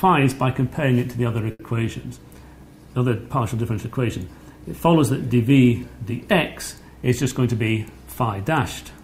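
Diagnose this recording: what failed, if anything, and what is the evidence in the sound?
Short stall from a late packet at 1.51–1.75 s, a network and jitter-buffer fault. A packet arrived late, the buffer ran dry, and the receiver held the last sound for about 80 ms before resuming where it stopped. Nothing is lost, but one sound drags, adding 80 ms of delay.

Jitter buffer speed-up at 6.95–7.76 s, also in the network receive path. With too much audio queued, the receiver repeatedly cut pitch-period-sized pieces, trimming roughly a tenth of a second. The sound runs at 111% speed with unchanged pitch and comes across as hurried.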